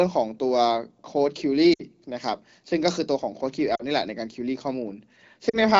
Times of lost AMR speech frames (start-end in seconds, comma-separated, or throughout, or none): 1.73-1.82, 3.76-3.82, 5.49-5.58